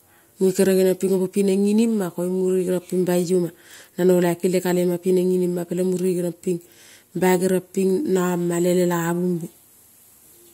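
Nothing in this recording trips any alarm, since the talking runs along with no dropouts, clicks, glitches or other technical trouble to point to at any moment.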